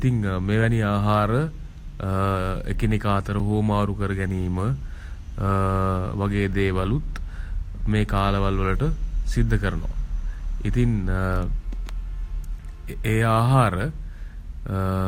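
A speech recording with a single hard-edged dropout at about 3.39 s: the sound stops dead for roughly 6 ms of silence, then resumes abruptly. This is a gap between stream segments. The timestamps of two consecutive 6-second segments don't quite meet, so the player fills the small hole with silence. Nothing is lost from the audio; the timeline is stretched by about 5.6 ms at the join.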